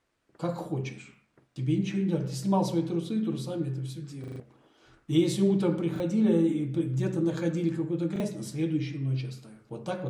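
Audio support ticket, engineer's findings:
Short hard-edged stutters at 1.52–1.56 s, 5.96–6.0 s and 8.16–8.2 s: one 40 ms slice heard twice. Longer stutter at 4.24–4.4 s, same slice looping about five times, roughly 150 ms of audio gone. Repeated buffer at playback: new data late, device replays last block. Repeat length fits a 40 ms buffer. Probable component: output driver or audio callback underrunning.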